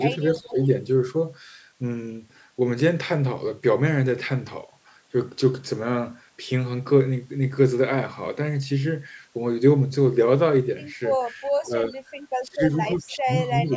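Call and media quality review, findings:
Speech suppressed in double talk, likely the far-end echo canceller treating overlap as echo and clamping gain on its own talker and the echo together. 0.34–0.56 s, 11.27–11.95 s, 12.43–12.76 s, 13.01–13.34 s, 13.63–13.76 s. Talker level dips by roughly 10 dB in the first, second and last spans and by roughly 20 dB at 12.43 s and 13.01 s. The dips last roughly 150 to 300 ms. Clustered near the end, the talker is audibly ducked in pieces.

Echo leak, likely residual echo passing a loudspeaker-side canceller that did not remove all of it. 0.38–0.71 s and 13.68–13.75 s, both overlapping suppression spans. A faint delayed copy of the voice trails by 351 ms, about 25 dB below speech in the first and about 30 dB below in the second. It is heard as a short ghost rather than a sustained echo.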